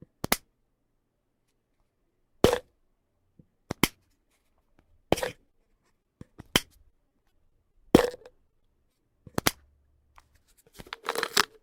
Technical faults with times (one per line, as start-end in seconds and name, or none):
5.33-6.07 repeated packet loss (robotic sound)
6.61-7.76 repeated packet loss (robotic sound)
8.12-8.97 repeated packet loss (robotic sound)